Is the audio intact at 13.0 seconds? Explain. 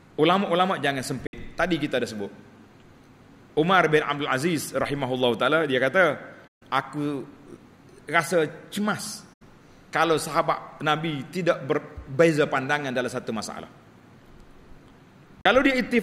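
Yes, at 13.0 seconds the audio plays through cleanly, with no dropout, click, distortion or other fault at that moment.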